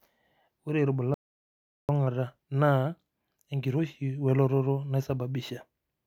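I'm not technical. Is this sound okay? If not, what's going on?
No. The recording likely lost its input for a moment, such as a loose microphone connection or a brief mute, and kept writing silence. This audio dropout to silence runs from 1.14 to 1.89 seconds: the speech cuts off completely for about three-quarters of a second, and whatever was said then is lost.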